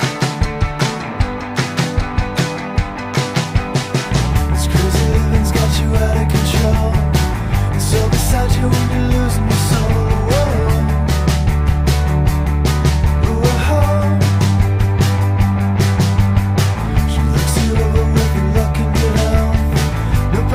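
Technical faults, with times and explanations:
Throughout, sample clock jitter: the converter's clock wanders by about a microsecond and a half, so each sample lands slightly early or late. Loud, bright passages, where the waveform moves fastest, pick up a grainy hiss about 40 dB down that vanishes in quiet stretches.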